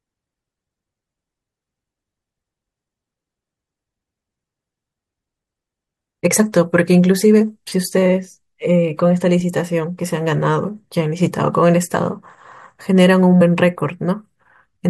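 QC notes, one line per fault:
11.94 s, 13.40 s: compressed frames skipped. The speech jumps ahead about 50 ms, then 100 ms, in whole 23.2 ms frames, with no silent gap.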